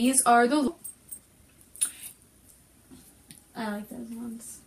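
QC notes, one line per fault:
0.67–0.69 s, skip ahead: playback jumps forward with no gap filled in. Around 0.4 s of audio is missing, dropped in transit or when the jitter buffer overflowed while later audio waited, so both sides of the jump butt together almost directly.
0.77–1.73 s and 2.13–2.67 s, jitter buffer speed-up: the buffer held more audio than its target, so the receiver repeatedly cut short pitch-period pieces, roughly a tenth of a second in the first run and less in the second. Speed reaches 112% and 113%, sounding hurried at unchanged pitch.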